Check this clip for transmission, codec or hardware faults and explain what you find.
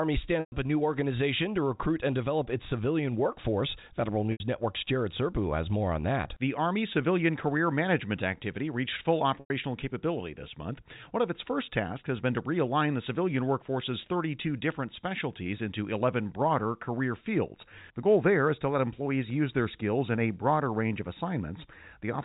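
Three short gaps from packet loss with pitch repetition appear in the audio, carried over G.711 telephone coding whose narrow band shows no added damage. They fall at 0.40 to 0.52 s (120 ms), 4.32 to 4.40 s (80 ms) and 9.40 to 9.50 s (100 ms), sizes that fit lost 20 ms packets. The receiver fills each hole by looping the last pitch period. At these lengths you hear a brief held buzz that fades to silence before the speech cross-fades back in. A plain dropout would cut straight to silence, without the buzzy sustain.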